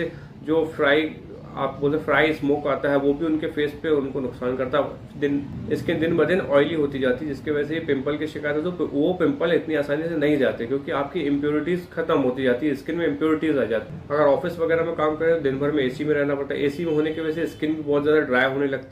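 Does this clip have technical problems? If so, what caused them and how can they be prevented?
No, nothing in this recording points to a technical problem, so there is no cause to trace and nothing to prevent.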